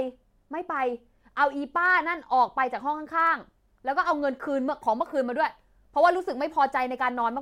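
Throughout the speech, a block size mismatch (truncated) discards the tail of each block, producing a steady buzz at 43.1 Hz, consistent with 1024-sample writes, while playback speed stays at 1.0x.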